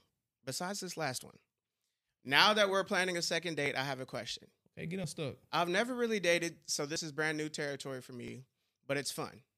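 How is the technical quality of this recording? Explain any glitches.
The speech is interrupted by five small skips where the sound jumps forward, at 1.24, 3.66, 5.04, 6.96 and 8.28 s. About 20 ms goes missing at 1.24, 3.66 and 8.28 s, and roughly twice that at 5.04 and 6.96 s. The likely cause is a dropped buffer (overrun): audio wasn't collected before being overwritten, so the two sides join with no gap.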